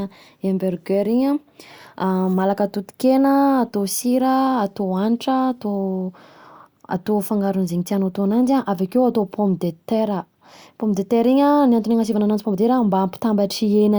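Nothing in the speech stood out as a technical fault on listening.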